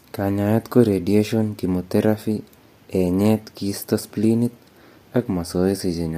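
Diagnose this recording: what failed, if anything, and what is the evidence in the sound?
Low-delay AAC compression, present throughout the speech, most likely from the codec stage. The voice sounds rough and grainy, with noise filling the gaps between harmonics and a dulled top band, which fits AAC-ELD near 32 kbps, whose short frames resolve pitch harmonics poorly.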